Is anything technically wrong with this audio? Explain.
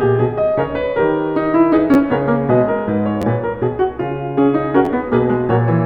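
Yes, the music has three repeated-buffer faults, at 1.94–1.96 s, 3.22–3.24 s and 4.85–4.88 s. Each time, fresh audio arrived late and the device replayed its last 11.6 ms block, which fits a 512-sample buffer, twice more. The result is a brief buzzy stutter with essentially nothing lost. On a waveform, an identical short segment repeats three times with hard seams; a spectrogram shows thin vertical lines at each join.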